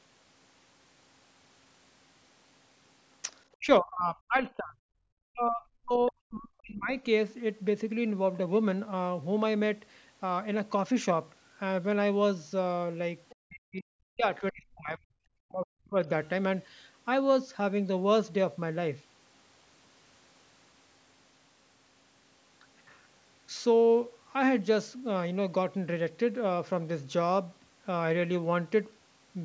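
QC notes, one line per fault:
3.58–4.78 s, 5.32–7.04 s, 13.37–15.14 s, 15.36–15.96 s: speech suppressed in double talk. The talker's speech sinks sharply, by up to about 40 dB, for roughly 0.7 to 1.5 s each time. This is likely an echo canceller mistaking overlapping talk for echo and turning everything down.
13.29–13.35 s: other side's voice leaking through. A brief, faint scrap of a second voice slips in, far below the talker. It likely comes from loudspeaker echo that the canceller failed to remove, just before the next suppression begins.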